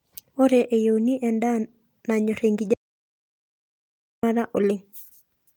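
At 2.74 s the speech cuts off abruptly and the track falls to silence until 4.23 s, when it resumes mid-flow. This is an audio dropout to silence lasting about 1.49 s. No room tone or noise floor survives in the gap, which points to the input being lost while the recorder kept writing silence. The likely cause is a disconnected device, a failed link or a momentary mute. Whatever was spoken in those 1.49 s is unrecoverable.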